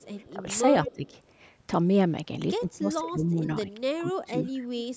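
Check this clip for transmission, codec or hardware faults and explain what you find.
Two call faults are present: echo leak and speech suppressed in double talk.

Echo leak appears at 0.00–0.07 s, 0.26–0.30 s and 0.87–1.07 s. A copy of the speech trails about 203 ms behind. It is about 35 dB down at first, then rises to about 10 dB below the speech. The likely cause is a far-end echo canceller letting loudspeaker sound back into its microphone.

Speech suppressed in double talk occurs at 0.31–0.45 s, 0.85–1.12 s, 2.6–3.48 s, 3.66–3.80 s and 3.99–4.62 s. The speech dips or drops out in pieces. It falls by up to about 20 dB. The likely cause is an echo canceller that cannot tell live talk from echo and turns both down.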